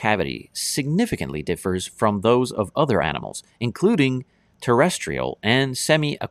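Two sharp clicks break the speech. The first comes at 3.32 s, right after "from those of other". The second is at 5.01 s. Each is a single brief tick with no gap in the sound. The likely cause is dropped samples: a tiny fraction of a millisecond of the stream goes missing. The waveform then jumps straight to a later value. That step is far too short to remove any sound, so it is heard only as a click.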